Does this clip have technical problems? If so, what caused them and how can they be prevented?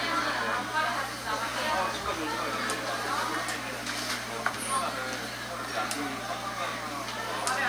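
Yes: mains hum throughout, a steady 60 Hz tone about 15 dB below the sound, coupled in from the power line via a ground loop or transformer. Preventing it means using balanced cables, keeping all gear on one grounded outlet, and moving leads away from transformers and power supplies.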